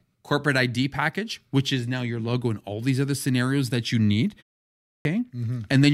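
A speech clip with a clipped start after a pause at 4.7 s. Following a 0.36 s silence, the output path is still waking when sound resumes, so about 0.35 s is swallowed and speech bursts in abruptly. Unlike muted pauses, which only empty the gap, here speech itself is lost.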